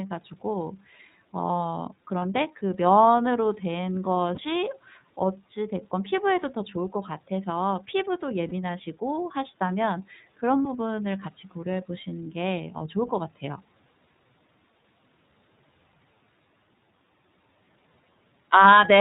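The clip is speech passed through the iLBC codec. The band stops at 4 kHz, so the sound is narrow and dull. Coding damage is plainly audible. The voice has a rough, slightly synthetic edge. Each block of excitation is coded on its own, and the block timing fits 30 ms frames at a rate near 13 kbps. There are also five lost iLBC frames, at 2.19, 4.35, 8.49, 10.63 and 12.78 s. Each gap lasts about 30 ms, which points to a single missing frame. The decoder fills it by repeating the last pitch cycle blended with noise. Each one sounds like a brief held, buzzy vowel. The voice snaps back almost immediately, since the next frame decodes without needing the lost one.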